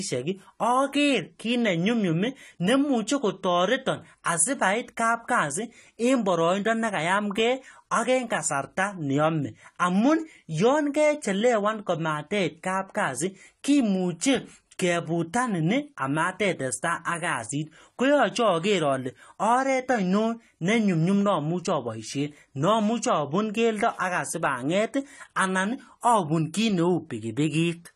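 From start to end the speech sounds dull and smeared, with a watery, fizzy edge on sibilants, which points to AAC compression, likely at a low rate near 32 kbps. A spectrogram shows nothing above 14 kHz.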